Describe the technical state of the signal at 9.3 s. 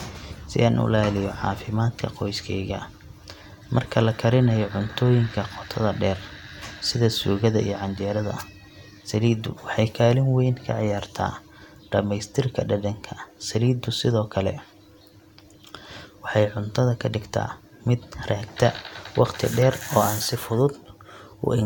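The speech signal at 9.3 s is intact, with no fault present at that moment.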